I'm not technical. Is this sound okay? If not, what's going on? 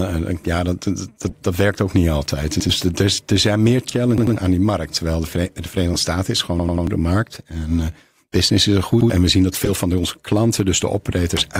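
No. At about 1.21, 3.89, 5.93 and 9.57 seconds the speech is interrupted by short squeaks or bursts of noise, the one at 9.57 s being the loudest. Each is a corrupt frame decoded: a small chunk of compressed data got damaged, and the player played it anyway, producing sound that doesn't belong.

At 2.60, 4.18, 6.60 and 9.01 seconds the speech stutters. A slice just under a tenth of a second plays again, twice extra at 4.18 s and three times extra at 6.60 s. This is a repeated buffer: fresh audio arrived late, so the player repeated what it had and skipped a fraction of a second.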